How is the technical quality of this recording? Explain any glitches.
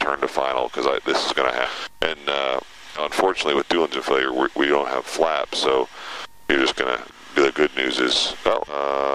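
The recording has four glitches, all compressed frames skipped, near 1.65–1.70, 2.95–3.02, 7.09–7.16 and 8.67–8.74 s. Whole compressed frames were missing or rejected as damaged, so the sound jumps ahead, by about 0.3 s at the first and third, a tenth at the second, and a fifth at the fourth, consistent with 20 ms frames. Unlike a dropout, nothing goes silent; the material simply lurches forward at a short join.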